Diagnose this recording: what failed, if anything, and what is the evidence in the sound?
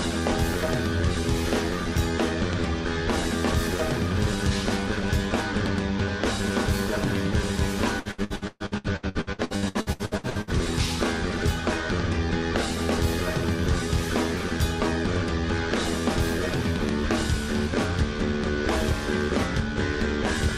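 The network is the culprit. From 7.99 to 10.50 s there's repeated packet loss (robotic sound): about 20 holes, the longest around 126 ms, each patched by stretching the last bit of sound. Roughly half that stretch is concealment, so it comes out choppy and robotic.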